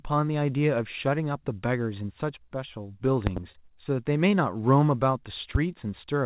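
At 3.27 to 3.40 s two sharp pops burst out, about 20 dB above the speech, which keeps going underneath. This loud pop is likely a voltage spike from a plug, switch or static discharge entering the signal chain.

From 3.52 to 3.57 s the sound briefly hangs and is held for about 26 ms. This short stall from a late packet happened when the jitter buffer ran empty, so the receiver stretched the last audio until the packet arrived. Nothing is lost, but playback runs 26 ms later afterwards.

At 5.55 to 5.58 s a single loud pop cuts through, about 15 dB over the speech. It points to the same kind of electrical pulse as the earlier pair.

Throughout the clip the audio stops at 4 kHz, which fits a G.711 call path.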